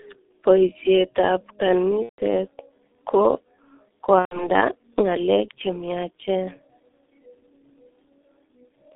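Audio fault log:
throughout: G.723.1 codec. The speech is squeezed into a narrow phone band, roughly 300 Hz to 3.7 kHz, and sounds muffled and hoarse with smeared consonants. That fits heavy coding at around 6.3 kbit/s, where the slow-updating voice model can't keep up.
2.03–2.21 s and 4.19–4.49 s: VoIP packet loss concealed by the speech codec. About 150 ms, then 120 ms, of audio drop out, which fits five and then four lost 30 ms frames. The decoder stretches the last sound into a buzzy tone or coloured noise that fades, and the voice stays weak briefly afterwards.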